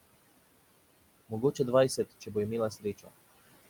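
Noise suppressor artifacts run through the whole clip. The suppressor turns down every band it takes for steady noise, by about 20 dB. The room noise, about 14 dB below the speech, sinks in the gaps and rises under the speech.

Speech cut by the noise suppressor comes at 1.97 to 2.36 s and again at 2.71 to 3.09 s. Here the suppressor mistakes parts of the speech for noise. The level drops by about 13 dB, then by about 17 dB. Roughly a tenth of a second in the first span, and somewhat more in the second, sounds swallowed and faint.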